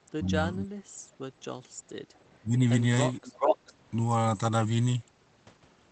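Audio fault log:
0.12–0.72 s and 2.4–2.63 s, speech suppressed in double talk: the speech sinks hard in both spots, by about 25 dB in the first, where roughly half a second is affected, and about 20 dB in the second, which is close to 0.2 s. That's likely the echo canceller hearing both ends at once, failing to tell this talker apart from loudspeaker echo, and clamping down on everything.
3.25–3.73 s, echo leak: a delayed copy of the speech comes back about 0.43 s behind the original and at about the same level as the speech itself. Most likely the far end is on a loudspeaker and its echo canceller let its mic pickup slip through and sent it back. Like the rest of the audio, it's band-limited to about 8 kHz, which fits an Opus call path.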